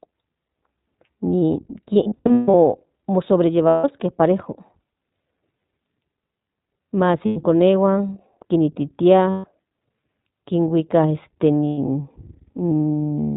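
iLBC codec damage runs through the whole clip. The speech is confined to the narrowband range, with nothing above 4 kHz, and it has a plainly audible rough, slightly synthetic edge. That comes from each short frame's excitation being coded independently, with no carry-over from the one before. The texture fits iLBC's 15.2 kbps mode with 20 ms frames.

Lost iLBC frames first appear from 1.94 to 2.55 s. About 420 ms of audio goes missing in pieces scattered across 600 ms, and the longest single gap is around 150 ms. Shorter losses follow at 3.68 to 3.84 s (160 ms), 5.58 to 5.62 s (40 ms), 7.26 to 7.38 s (100 ms), 9.30 to 9.46 s (140 ms) and 11.68 to 11.79 s (100 ms). In each gap the decoder repeats the last pitch cycle mixed with noise, so the sound becomes a held, buzzy or breathy vowel that fades over the longer stretches. Because the frames stand alone, the voice is right again almost immediately afterwards.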